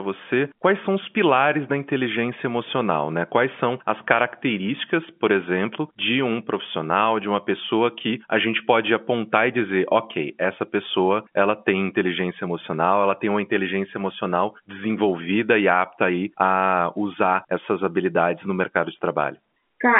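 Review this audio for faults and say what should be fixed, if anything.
Nothing in this audio needs to be fixed, as the review turns up no faults.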